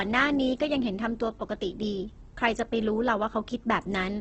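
Opus compression throughout: the speech sounds grainy and rough, with nothing above 8.2 kHz, likely from Opus's music mode at roughly 12 kbps filling starved bands with noise.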